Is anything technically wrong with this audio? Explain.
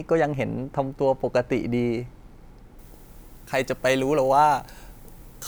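Yes. From 2.79 s to the end, pre-emphasis is left on: a 75 µs FM treble boost without its matching de-emphasis lifts 10 kHz about 14 dB, making the speech thin, bright and sibilant.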